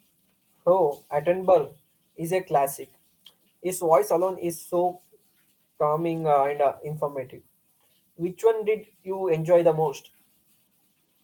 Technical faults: lost packet rebuilt from error correction

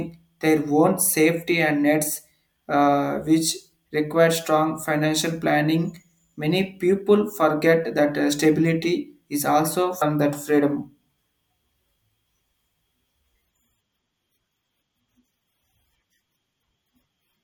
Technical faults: adaptive stream at a lower bitrate

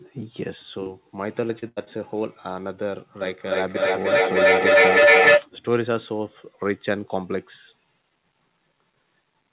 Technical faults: short concealed packet loss; repeated packet loss (robotic sound); feedback echo between two devices

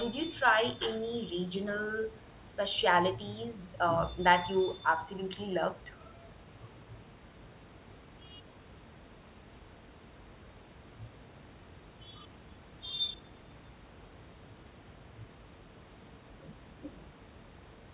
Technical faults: none

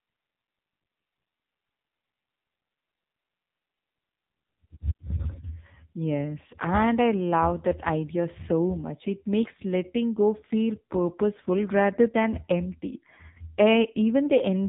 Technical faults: AMR narrowband mobile codec

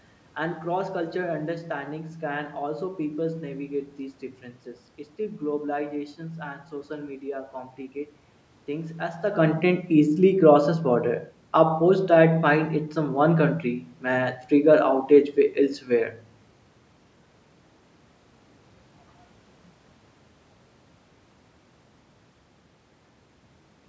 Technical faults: none

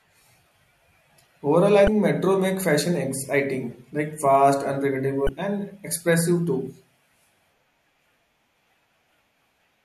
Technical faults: damaged data in a compressed stream

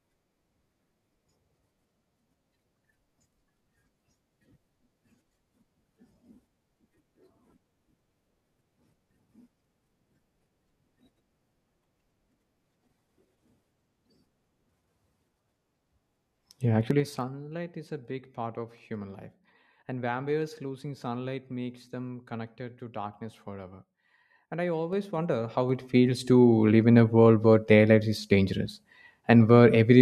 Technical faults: zipper noise

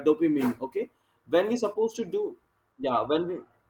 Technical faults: short concealed packet loss

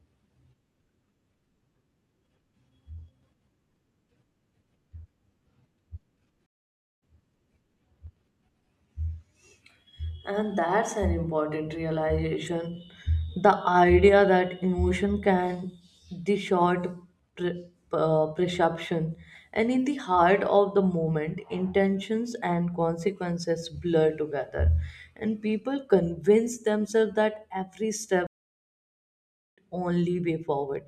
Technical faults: stream reconnect

